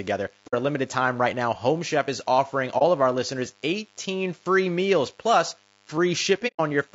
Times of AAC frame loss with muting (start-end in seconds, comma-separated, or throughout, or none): 0.47-0.54, 2.78-2.82, 6.47-6.60